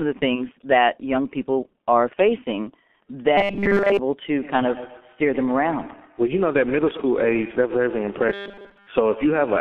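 The whole recording has passed through the G.723.1 codec at about 6.3 kbit/s over a telephone line limited to roughly 250 Hz to 3.4 kHz. The coder rebuilds speech from a coarse model refreshed only every 30 ms, and the damage is heavy: the voice is muffled and hoarse, with no brightness above the line's ceiling, thin low end, and consonants smeared into each other.

From 0.35 to 0.42 s there is VoIP packet loss concealed by the speech codec. A gap of about 30 ms, which fits a single lost frame, was filled by the decoder carrying forward its last pitch and filter settings at falling gain. It comes across as a brief buzzy, stretched smear that dips in level, with the voice sounding weakened for a moment afterwards while the decoder's model recovers.

From 3.37 to 3.99 s, and again from 8.28 to 8.88 s, there is robotic sound from repeated short buffers, likely from audio arriving too rarely so that the playback kept looping its most recent fragment while most of the real signal was dropped. 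A 200 Hz buzz fits a 5 ms loop. The speech turns into a rigid metallic drone that only loosely tracks the syllables.

From 4.27 s to the end there is feedback echo between two devices. A second device on the same call plays the far-end audio back into a microphone, and the echo canceller on that side cannot remove sound it did not itself produce. Each stretch of speech returns roughly 150 ms later, at up to about 15 dB below the direct voice, sounding thinner and ringing, like a close slapback trailing every phrase.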